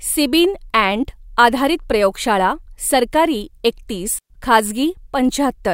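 At 4.19 s, right after "आधारित प्रयोगशाळा सरकारी एकतीस", the speech drops into a digital wireless dropout. The radio link lost too much data, so the receiver muted with a very short fade, leaving a clean hole of near silence lasting about 115 ms, with no noise burst on either side.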